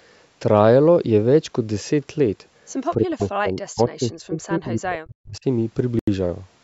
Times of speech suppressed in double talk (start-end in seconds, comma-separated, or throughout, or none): 2.96-5.46